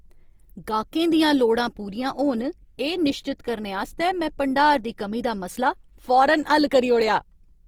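Opus compression damage is plainly audible throughout the speech. Starved bands get filled with folded or noise content, so tones sound rough and grainy rather than swirling. Bandwidth stays full, up to 20.2 kHz. This likely points to CELT mode near 24 kbps.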